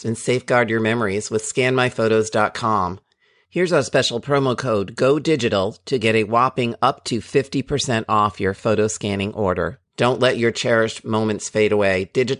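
No technical faults are audible anywhere in this recording.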